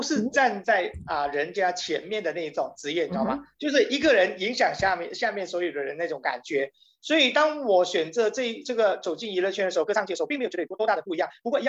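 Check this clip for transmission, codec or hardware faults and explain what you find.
There's one fault, right at the end. From 9.79 s to 11.68 s there's a time-stretched section: the audio suddenly runs about 1.57 times faster with unchanged pitch, likely software dropping short slices to squeeze it, so it sounds rushed.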